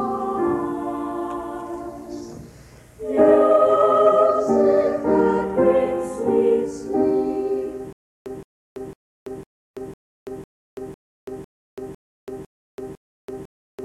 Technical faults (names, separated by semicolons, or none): stutter with silent gaps